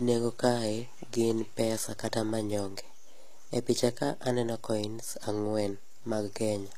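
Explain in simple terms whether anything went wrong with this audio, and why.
DC offset runs through the whole recording, from start to finish. The entire waveform sits shifted away from its centre line by a fixed amount. You can't hear that shift itself, but it wastes some of the room the signal has before it clips.

HE-AAC compression was likely used on this speech, and its damage is plainly audible throughout. The format keeps only the lower frequencies and fakes the treble by copying lower bands upward. So s sounds come out gritty or lispy, and nothing survives above 14.9 kHz.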